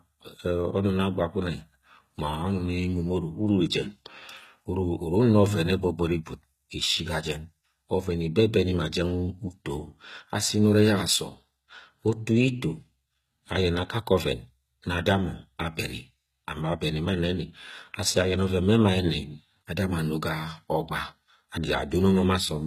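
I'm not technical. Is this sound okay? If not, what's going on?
No. The speech has been squeezed hard to save space, most likely by HE-AAC compression. This method stores only the lower part of the sound properly and fakes the treble by copying lower sounds upward. Throughout the clip, the treble is not genuine, and nothing reaches above 14.9 kHz. The damage is plainly audible: the s sounds come out gritty, metallic or lispy from start to finish.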